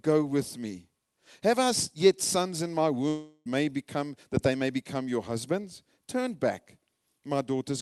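At 3.08 s, right after "yet sons in my", the speech breaks off and is replaced by a buzzy or hissy continuation of the last sound that fades over roughly 0.37 s, followed by a brief silence of about 30 ms before speech resumes at 3.47 s with "may become that they". This is likely a long network dropout: about 0.38 s of audio never arrived, and the receiver's concealment filled the gap with a fading extension of the last sound. The missing stretch is simply absent. The call path's band limit around 12 kHz, which fits an Opus super-wideband setting, applies throughout.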